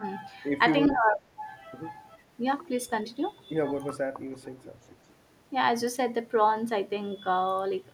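An echo canceller on a loudspeaker end likely let part of its microphone pickup through, so an echo leak returns a delayed copy of the speech: from 0.94 to 1.11 s about 0.41 s late and fairly audible, then from 4.31 to 4.71 s about 0.43 s late and much fainter.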